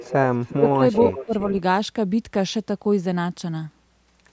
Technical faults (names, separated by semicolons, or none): echo leak; speech suppressed in double talk